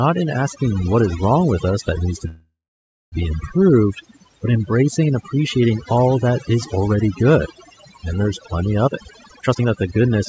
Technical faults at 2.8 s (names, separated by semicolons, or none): overdone noise removal; call audio freeze